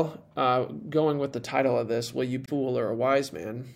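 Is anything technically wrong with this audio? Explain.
Yes. From 2.42 to 2.49 s the speech is interrupted by a brief glitch caused by damaged data in the compressed stream. Corrupted bytes make the decoder misread those frames and lose sync until it finds a valid frame header, producing about 70 ms of disturbance.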